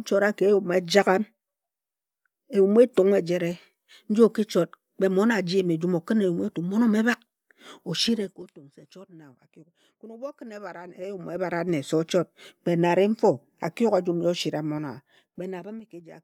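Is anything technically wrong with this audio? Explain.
Yes. Zipper noise occurs in three speech passages: 8.05–8.57 s (level falling by about 20 dB at roughly fifteen steps a second), 10.77–11.84 s (rising about 20 dB at around seven steps a second) and 14.68–16.01 s (falling about 20 dB at around five steps a second). The gain moves in unsmoothed 3 dB jumps, each producing a small click that gives a ticking, zipping texture. A waveform shows a staircase envelope, and a spectrogram shows thin vertical broadband lines at each step.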